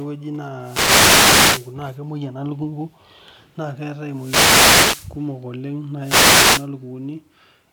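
Three wireless microphone noise hits break into the speech, at 0.60 to 1.75 s, 4.09 to 5.19 s and 6.00 to 6.69 s. Each one is a burst of hissing static that swells and then clears. The radio link from the microphone is fading. Reflected signals cancel the direct one, and the receiver's own noise rises through the voice. The first two last just over a second. The last is shorter, at about 0.7 s.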